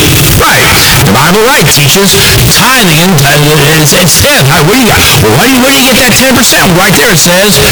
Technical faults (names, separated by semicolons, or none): float read as integer